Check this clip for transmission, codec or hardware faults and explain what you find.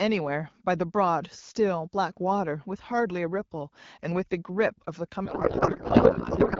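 One fault stands out, near the end. From 5.26 s to the end, the speech collapses into garbled noise and warble that barely tracks it. This is a codec payload misread: octet-aligned AMR frames were read as bandwidth-efficient, so the decoder found every field in the wrong place. Before that point the light coding character fits AMR-WB at about 12.65 kbit/s.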